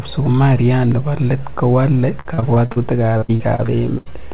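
Speech clip with two stretches of repeated packet loss (robotic sound), from 2.2 to 2.78 s, right after "nebo let kowale", and from 3.18 to 4.08 s. In each, a run of short holes is patched by stretching the preceding sound, so the speech turns choppy. Roughly a third of the first stretch and about a quarter of the second is concealment, with the longest holes 47 ms and 79 ms. On a spectrogram these appear as smeared, repeated harmonic slices with abrupt seams. The waveform shows copied cycles and small discontinuities. Across the whole clip, nothing reaches above 4 kHz, which fits a narrowband call codec such as 64 kbps G.711.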